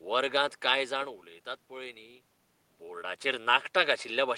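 No technical faults can be heard in the speech. Faint room noise sits about 54 dB below the speech, and the level shifts around half a second and again near two seconds as the talker moves relative to the microphone.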